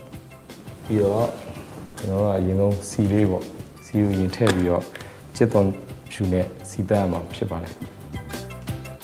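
At 1.85 to 1.96 s there is a short stall from a late packet. A packet arrived after its playout deadline, the jitter buffer emptied, and the receiver held the last sound for about 90 ms until the data came in, then resumed from the same point. Nothing is lost, but playback now runs 90 ms later. It sounds like a brief held, slightly buzzy smear. A spectrogram shows frozen, smeared horizontal bands, and the waveform shows a repeating, slightly dipped stretch.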